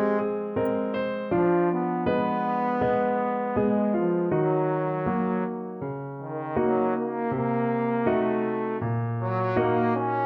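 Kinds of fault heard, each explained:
Electrical switching spike: There's a single sharp snap at about 0.66 s, over in roughly a hundredth of a second and sitting on top of the sound rather than replacing it. It's fairly quiet, peaking well down from full scale. The likely cause is a nearby switch, motor or static discharge throwing off a brief arc that the audio line picked up as a burst of interference.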